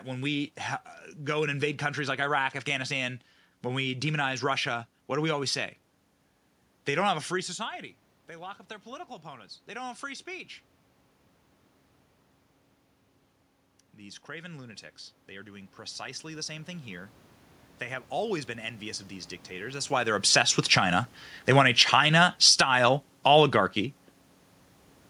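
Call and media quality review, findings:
Automatic gain rising, 7.47–10.55 s and 13.98–17.18 s: voice and room noise swell together as the AGC ramps up. The first follows the talker dropping about 17 dB around 7 s and claws back only about 4 dB. The second adds about 7 dB.

Automatic gain falling, 21.43–23.82 s: voice and background sink together by about 3 dB. The AGC is pulling gain back after finding the input too loud, or its background noise too strong.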